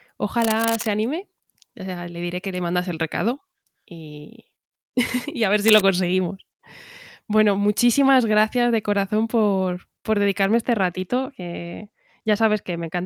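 A speech clip with two kinds of fault. From 0.40 to 0.87 s and again from 5.63 to 5.80 s, scratchy, rustling bursts sit over the speech, the second louder, roughly 5 dB below the speech against roughly 10 dB for the first. This is cable scratch noise, likely from a worn lead or connector being moved. From 10.45 s to the end, the sound turns dull and muffled. The treble falls away smoothly, about 11 dB down at 10 kHz relative to 1 kHz. That is de-emphasis applied wrongly, a treble cut meant to undo pre-emphasis applied where there was none, or applied twice.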